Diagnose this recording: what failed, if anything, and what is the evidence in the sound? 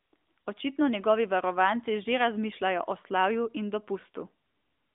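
Nothing failed here; the speech sits in a narrowband mobile path, passing roughly 250 Hz to 3.6 kHz with nothing above 3.7 kHz, and carries only the light coding texture that fits AMR narrowband at its 12.2 kbps mode.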